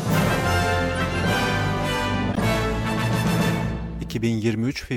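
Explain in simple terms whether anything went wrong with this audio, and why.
Corrupt frame decoded at 0.91–1.02 s and 2.32–2.41 s: damaged compressed data was played anyway, producing brief chirps, squeaks, blips or bursts of noise at the wrong frequencies.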